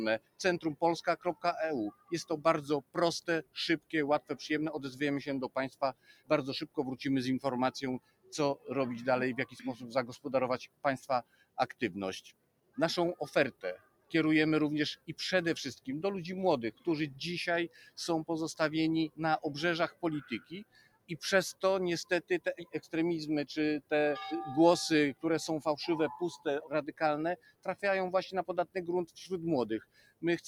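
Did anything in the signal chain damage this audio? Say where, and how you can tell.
Yes. The call-processing stage left a speech noise suppressor running on non-speech sound. Throughout, the level swings by roughly 15 dB as the suppressor treats sustained content and tails as noise, so attacks survive while held sound sinks, giving pumping, fluttering or thinning.

Sound cut by the noise suppressor occurs in spans at 0.19–6.78 s, 7.99–17.98 s, 19.09–23.91 s and 26.37–30.23 s. Within each span, about 1.5 to 3 seconds of steady or decaying material drops by up to about 20 dB, with decays truncated.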